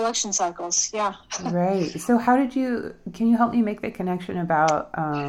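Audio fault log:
No faults: the clip is clean throughout.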